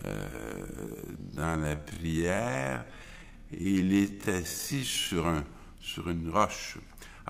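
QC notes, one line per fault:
0.0–5.1 s time-stretched section. Sound plays at half speed with pitch unchanged, so it drags. Likely software stretching that repeats short pieces.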